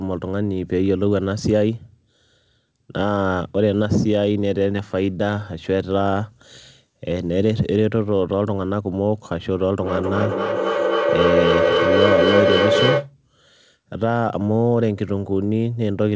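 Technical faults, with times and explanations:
9.82–13.14 s, feedback echo between two devices: speech returns roughly every third of a second, thinner and ringier each pass, building to about 2 dB above the original instead of fading. Another device in the room replays the call into its own microphone, and no echo canceller removes that loop.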